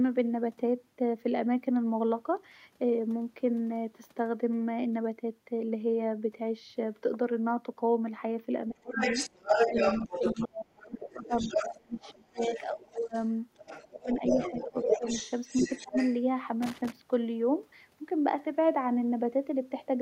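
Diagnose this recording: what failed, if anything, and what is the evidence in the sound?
Call processing: the speech drops by about 25 to 30 dB at 8.68–8.99, 9.69–13.15, 13.87–15.06 and 15.6–15.95 s, likely speech suppressed in double talk by the echo canceller.

Call processing: a second voice runs from 8.84 to 16.19 s at roughly the talker's level, likely the other side's voice leaking through past incomplete echo cancellation.

Analogue wiring: an irregular burst of crackle from 16.62 to 16.92 s points to loose connector crackle, a contact rapidly making and breaking the signal path.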